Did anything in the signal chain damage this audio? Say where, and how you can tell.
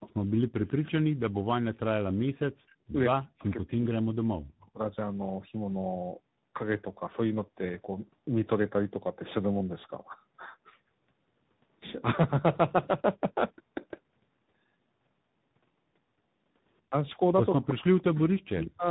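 Yes. Tandem speech coding runs through the whole clip, at the codec stage. Nothing survives above 3.8 kHz, and the speech has a rough, muffled, warbly quality that no single coder would produce. The sound fits two speech codecs in a row, ending in G.726 ADPCM. The call was decoded and re-encoded at a network border, so the second coder had to quantise the first one's artefacts. The damage compounds rather than averages out.

Echo leak appears at the call processing stage, at 0.00–0.91 s, 2.67–2.75 s, 3.41–3.86 s and 17.69–18.66 s. Each time a delayed copy of the speech follows the original by 161 ms. It is about 20 dB down at the start, very faint at 2.67 s, about 30 dB down at 3.41 s, and only about 10 dB down near the end. A far-end loudspeaker likely fed its microphone, and the echo canceller there failed to remove all of it.

Speech suppressed in double talk shows up at the same stage, at 0.84–1.85 s, 2.92–4.82 s, 16.89–16.95 s and 17.55–18.87 s. 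The wanted speech dips or chops out, by roughly 40 dB at its deepest and about 25 dB in the brief 16.89 s dip. Most of these drops overlap the echo bursts. The likely cause is that the echo canceller could not tell the local talker from loudspeaker pickup while both sides were active, so it attenuated everything.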